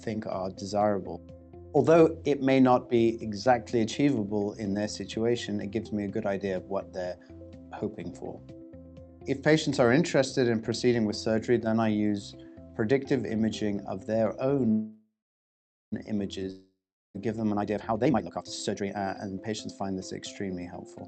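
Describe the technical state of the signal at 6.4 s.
At 6.4 s the signal is intact, with no dropout, glitch or distortion, just the steady, band-limited character of audio carried over a normally working WebRTC call path.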